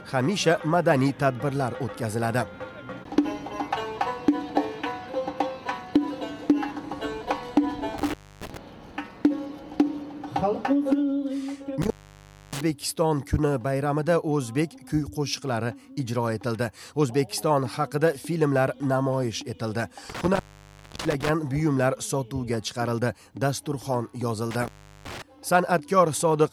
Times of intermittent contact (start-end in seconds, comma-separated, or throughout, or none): 7.98-8.57, 11.82-12.61, 20.10-21.29, 24.51-25.22